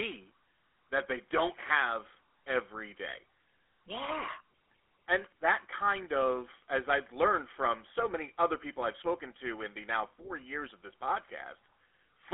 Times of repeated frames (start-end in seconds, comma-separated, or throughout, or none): none